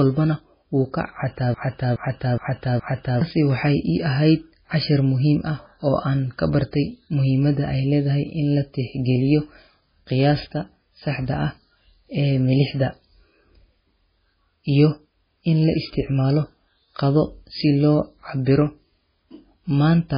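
MP3 compression runs throughout the recording. The speech has a hard ceiling with nothing above 5 kHz, and the remaining band sounds watery and swirly. That points to a likely cause: a very low-rate MP3 encode, somewhere around 16 kbps. At that rate the encoder sacrifices the treble entirely and drops the quieter frequency components, which flicker in and out between frames. The result is the heavy, unstable texture and softened consonant attacks heard across the whole clip.

A broken-record loop runs from 1.54 to 3.21 s. A fragment of about 0.42 s repeats exactly, four times back to back, before normal playback resumes. The likely cause is a stall somewhere in the player, encoder or stream, which kept re-sending the last piece it had buffered. Whatever sound belonged in that stretch never arrives, so the speech jumps forward once the loop ends.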